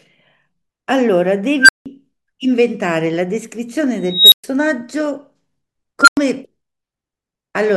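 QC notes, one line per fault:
1.61–1.86 s, unstable filter: a tone near 1.5 kHz swells over 80 ms as a runaway recursive filter diverges, clips, overflows, then drops to 170 ms of silence.
4.08–4.44 s, unstable filter: slower 235 ms build-up of a tone around 4 kHz until the diverging filter output clips and overflows, leaving 117 ms of silence.
6.01–6.17 s, unstable filter: a tone near 1.5 kHz grows within 63 ms to clipping as feedback coefficients push output without bound, followed by 96 ms of silence until reset.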